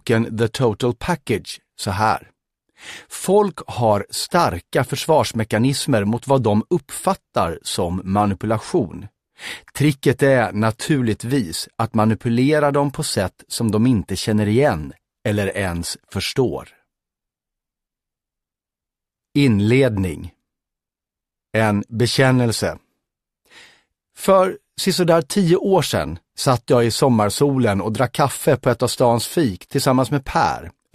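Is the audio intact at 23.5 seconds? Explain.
Yes, the audio is intact at 23.5 seconds, with no dropout, click, distortion or other fault at that moment.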